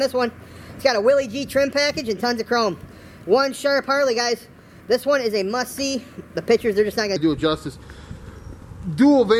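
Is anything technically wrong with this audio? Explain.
Yes. A section at the wrong speed runs from the start to 7.16 s, playing 1.25 times too fast, likely because a player or editor fitted it to the wrong clock. Speed and pitch rise together, so the sound is hurried and about four semitones high.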